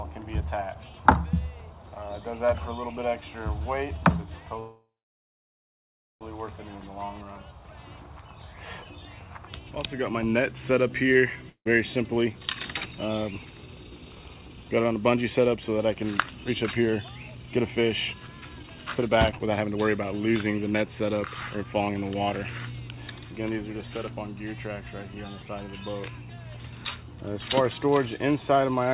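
At 4.6 s the sound stalls until 6.24 s, a call audio freeze. The last sound carries on as a fading buzz, then about 1.3 s of near silence follows. The likely cause is held-up packets draining the jitter buffer. When they arrive, the audio resumes where it left off. Nothing is lost. Instead, a gap of about 1.6 s has been inserted, and everything after it is pushed later.

From 11.49 s to 11.68 s there is a long network dropout. About 0.17 s of the gap is filled with a decaying continuation of the preceding sound, ending in roughly 0.09 s of quiet. About 0.24 s of the real audio is gone for good. The likely cause is a run of packets that never arrived. When the sound returns, it picks up further along, so it jumps ahead rather than resuming.

Right after, from 11.71 s to 23.49 s, comes a jitter buffer speed-up. The buffer now holds more audio than it wants. The receiver trims tiny slices of one or a few pitch periods, over and over. 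Playback runs at about 113 percent speed with the pitch unchanged, so it sounds hurried. Roughly one and a half seconds are removed in total. Throughout, the call path's G.711 mu-law coding leaves nothing above 4 kHz, giving a narrow, telephone-like band.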